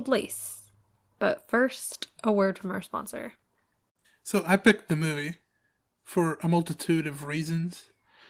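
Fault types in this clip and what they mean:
Microphone volume stepped down: The call software likely cut the microphone's input volume in a single step, so at 2.46 s, between "first a" and "from our sponsor", the voice and the background both drop abruptly by about 2 dB and stay at that lower level.
Microphone overload: The input volume was likely set too high, so the loudest peaks ran about 4 dB past the converter's ceiling and had their tops sheared off. Around 4.67 to 4.71 s a small share of samples is clipped, leaving a brief harsh, crackling edge.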